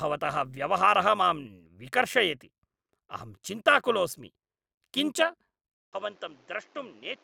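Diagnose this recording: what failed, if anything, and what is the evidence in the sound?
Frame-based processing recombined overlapping windows at uneven gain, so the speech level ripples by about 6 dB at around 100 Hz throughout, a metallic buzz.

At 5.74 s the input likely switched to a poorer device: after a 0.19 s gap, the band narrows, the level drops about 5 dB, and a new noise floor appears roughly 30 dB down.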